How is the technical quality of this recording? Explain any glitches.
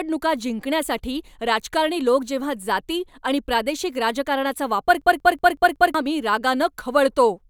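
One glitch spoils this speech recording. After "आणि प्रादेशिक राजकारणाचा वापर", from 5.02 to 5.94 s, a system hang loop repeats one 186 ms slice exactly five times at about 5.4 Hz, a machine-gun stutter fitting an 8192-sample buffer, losing about a second. Identical repeats distinguish it from dropout stutter.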